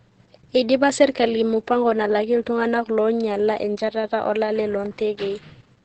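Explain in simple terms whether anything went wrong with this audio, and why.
Yes, the whole clip has heavy Opus voice compression, so the speech sounds muffled, hoarse and a bit robotic because the codec squeezed it down hard.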